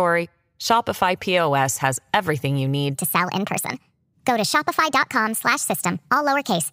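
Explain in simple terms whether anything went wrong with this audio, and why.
Right after "has everything you", at 2.95 s, the voice suddenly turns high-pitched and rushed, like a chipmunk, and stays that way to the end. This is a section at the wrong speed. From that point the audio plays 1.4 times faster than it was recorded, which also lifts the pitch by about five semitones, since speed and pitch rise together. The likely cause is that this part was played back or edited against the wrong clock.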